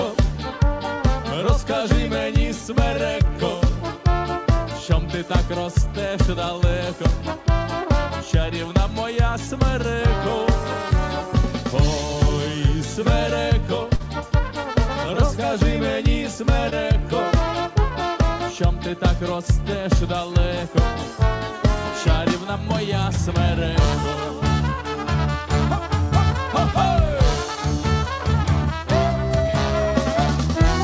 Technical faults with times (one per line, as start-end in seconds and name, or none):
13.96-14.02 short concealed packet loss
16.70-16.74 short concealed packet loss